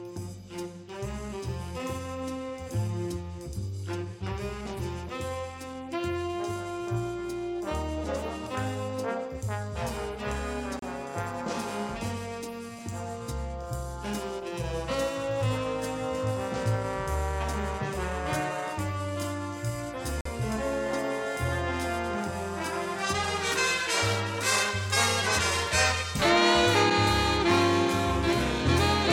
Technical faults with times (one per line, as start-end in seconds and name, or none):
10.79-10.82 Bluetooth stall
20.21-20.26 Bluetooth stall